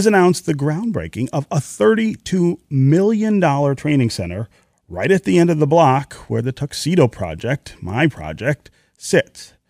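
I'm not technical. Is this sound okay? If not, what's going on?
Yes, nothing wrong can be heard in this recording.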